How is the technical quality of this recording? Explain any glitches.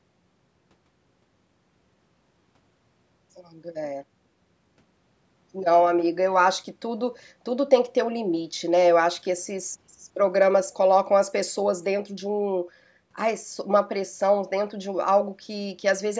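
The technical quality of this recording is sound, with no glitches to explain.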